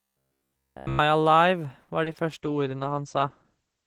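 From 0.02 to 0.99 s, before "alive var", the speech turns into a rigid, metallic buzz near 66.8 Hz. This is robotic sound from repeated short buffers. Audio likely arrived too seldom, so a short slice of about 15 ms was looped. Nearly every moment is a repeat.

At 1.83 s there is a short stall from a late packet. A packet came 50 ms late. The receiver held the last sound for 50 ms, then resumed where it left off. Nothing is lost, but one sound drags briefly.

Right after "alive var" come two cases of short concealed packet loss. They fall at 2.04 to 2.08 s and 2.12 to 2.16 s. Each time, 20 ms never arrived. The decoder extended the previous sound to fill the gap. Each one is heard as a quick smear or wobble.

From 2.29 s to the end there is a call bitrate drop. The rate falls from 40 to 11 kbps, and it stays at its lowest for about 1.4 s. Bandwidth narrows from 20 kHz to 8 kHz. The speech turns muffled, coarse and watery.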